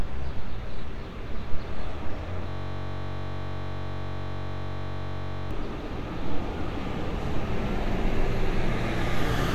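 At 2.49 to 5.51 s, a system hang loop replays one 21.33 ms buffer, a 46.9 Hz buzz seen as identical repeating waveform cycles.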